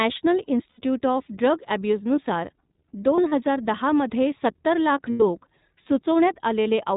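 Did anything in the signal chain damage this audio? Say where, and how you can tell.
Yes, at the codec stage. The speech is band-limited with nothing above 4 kHz and sounds slightly rough and synthetic throughout. That fits iLBC at about 15.2 kbps with 20 ms frames. On a spectrogram, energy stops at a hard ceiling near 4 kHz.

In the network stage, lost iLBC frames leave short buzzy held-vowel patches at 0.70–0.80 s, 3.16–3.33 s (broken gaps, longest around 40 ms), 5.10–5.23 s and 6.62–6.68 s. Concealment repeats the last pitch cycle with noise, and clean speech resumes almost immediately. The waveform shows repeated cycles, and the spectrogram shows frozen, smeared harmonics.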